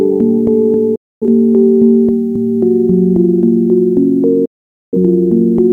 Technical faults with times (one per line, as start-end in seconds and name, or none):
0.95-1.26 digital broadcast dropout
4.45-4.97 digital broadcast dropout